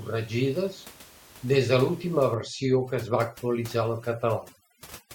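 Overdone noise removal begins at 2.34 s, right after "des de l'última", and lasts to the end. Bands near the noise estimate are cut hard, so the room noise, about 23 dB down, turns to twinkling near-silence and quiet speech detail vanishes.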